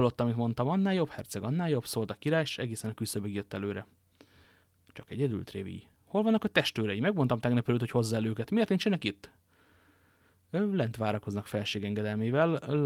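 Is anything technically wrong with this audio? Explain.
No, nothing technical stands out here; the speech comes across steady and intact, with nothing catching the ear.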